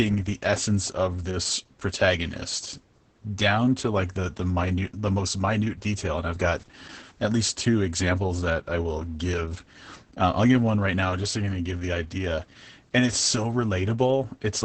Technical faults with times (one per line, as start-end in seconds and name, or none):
0.00-14.64 Opus voice compression